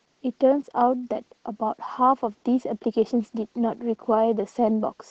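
From start to finish, heavy Opus voice compression in SILK mode cuts the band near 8 kHz and coarsens the excitation, which fits roughly 10 kbps, leaving speech muffled, hoarse and slightly robotic.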